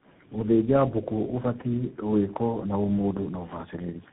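Tandem speech coding affects the whole clip. The speech sounds like it went through about four speech coders in a row, pointing to AMR, GSM and CVSD stages. Each coder worked on the previous one's damage. Nothing reaches above 3.8 kHz. The result is rough, muffled and warbly.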